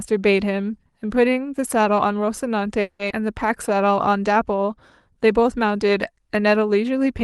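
At 2.81 s the speech stalls in a call audio freeze lasting about 0.2 s, to 3.01 s. The likely cause is packets held up in transit until the jitter buffer ran dry, so the receiver stretched the last sound into roughly 180 ms of fading buzz instead of going silent. Nothing is lost; the speech simply resumes late. On a spectrogram the final frame's harmonics smear sideways into a blurred, decaying band. The waveform shows a repetitive, shrinking envelope where the speech should continue.

Almost immediately, from 3.09 to 3.12 s, comes a skip ahead. Later audio was already queued when about a tenth of a second was dropped. Playback lurches forward, and the two sides are butted together with only a trace of fill between them. You hear a clipped, jumpy join where part of a sound is missing. The spectrogram shows an abrupt vertical seam where formant tracks break and restart at different positions.

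From 3.33 to 4.76 s a jitter buffer slow-down follows. The buffer was rebuilding its reserve by repeating single pitch periods and slivers of pauses, adding 96 ms over that stretch. The speech runs at about 94% speed with unchanged pitch, so syllables sound slightly drawn out. On a spectrogram the harmonics stay at the same frequencies, but voiced segments are elongated, and the waveform shows runs of near-identical repeated cycles. Across the whole clip the spectrum stops sharply near 12 kHz, from the Opus call path.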